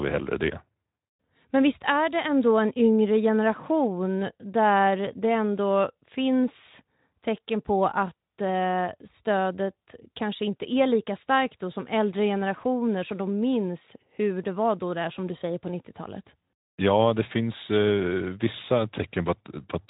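No technical faults occur at any point in the speech, so there is nothing to place in time order.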